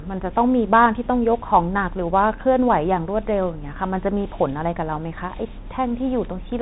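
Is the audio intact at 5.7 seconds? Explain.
No. At 5.7 seconds, as through the whole clip, the speech is narrow and muffled, with nothing above about 3.8 kHz, a granular hiss beneath it, scratchy s sounds and roughness on louder high-frequency energy. This is the Bluetooth CVSD headset codec, which fits a 64 kbps CVSD stream: each sample is only a single up-or-down bit with an adapting step size, so fast loud changes outrun the step and distort.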